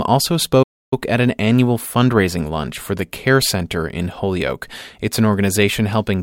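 At 0.62 s the player likely ran out of buffered data or had its thread blocked, causing a playback stall. The speech drops to silence for 0.29 s in mid-flow, then resumes at 0.93 s with "at an annual fundraising".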